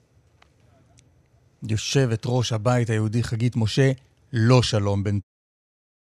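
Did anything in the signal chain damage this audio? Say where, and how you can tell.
No, nothing in this speech stood out as damage on listening, and the smooth fade-out that begins around 5 s and finishes at 5.24 s sounds like a deliberate edit.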